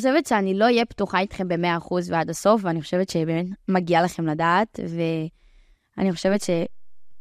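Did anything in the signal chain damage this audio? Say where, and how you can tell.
Yes: a DC step at 6.27 s at the converter stage shifts the zero line by about -35 dBFS, held until 7.20 s. It is heard as a low thump, seen as an offset baseline on the waveform and a brief low-frequency flash on the spectrogram.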